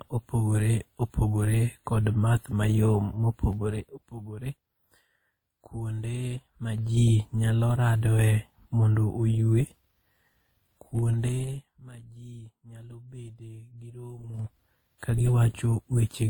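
Throughout the speech, smeared, warbly artefacts layered with a different, grainier coloration point to transcoding between lossy codecs, likely a low-rate Opus-style stream re-encoded to WMA. Unlike single-codec damage, two distinct artefact types coexist, with nothing above 20.1 kHz.

Zipper noise appears at 3.44 to 4.18 s, right after "opogore kod math mayom" (about 10 dB down), at 6.32 to 7.06 s before "nyalo radoe mondo oywe" (about 10 dB up), at 10.91 to 11.98 s before "ji nyalo bede gi" (about 20 dB down), and at 14.21 to 14.58 s (about 20 dB up, much faster). The level moves in unsmoothed 3 dB steps, each leaving a tick.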